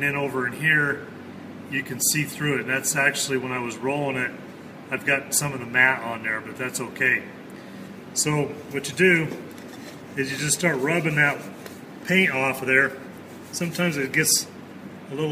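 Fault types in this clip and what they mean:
No technical faults can be heard anywhere in the clip. Nothing in the audio calls for a fault entry.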